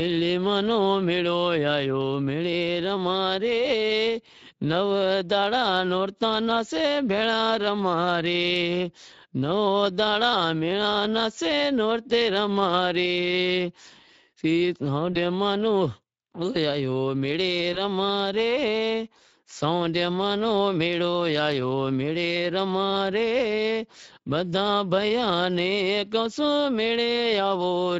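Across the whole recording the speech has a hoarse, grainy edge, with a noisy texture riding on every voiced sound. That is the Speex codec at work. Its CELP model has too few bits to code the excitation cleanly, so the fine detail of the voice is replaced by a rough approximation, which fits a middle quality mode near 16.8 kbps. Any content above 4 kHz is a shaped noise fill rather than real detail.

At 15.13 s the voice briefly smears and sags in level before normal sound resumes around 15.17 s. The same thing happens at 17.73 s, lasting until about 17.79 s. Both are VoIP packet loss concealed by the speech codec. The gaps point to roughly one 20 ms frame going missing each time, and the decoder filled it by repeating its last pitch and filter with falling gain. Because each decoded frame builds on the one before, the distortion lingers past the missing audio itself.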